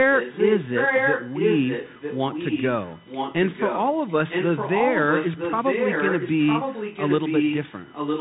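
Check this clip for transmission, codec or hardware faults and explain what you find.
Three faults are audible: a steady whine, narrowband codec damage, and a delayed repeat of the speech.

USB whine runs throughout. A fixed 1 kHz tone, strongest at 2 kHz, sits well below the speech. Bus current in 1 ms frames leaks into the audio.

Bluetooth CVSD headset codec damage is heard throughout. Nothing passes above 3.8 kHz. Its one-bit adaptive steps leave scratchy sibilants and granular hiss, consistent with a 64 kbit/s stream.

Echo leak appears from 0.13 to 2.65 s, then from 2.84 s to the end. A copy of the speech returns 957 ms late. It is about as loud as the speech at first, then somewhat quieter. Likely cause: an echo canceller failing on a loudspeaker call.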